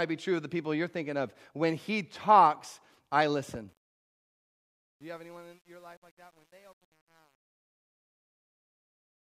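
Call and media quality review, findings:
Gritty, stepped grain on the fade-out after "he talks I listen", from 3.69 s, worst 4.48–9.22 s; truncation distortion on a fade, undithered gain stage, fits about 9-bit resolution.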